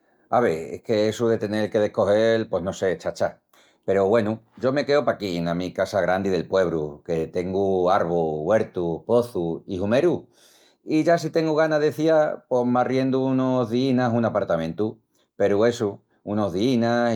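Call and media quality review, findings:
No audible faults found on review of this speech recording.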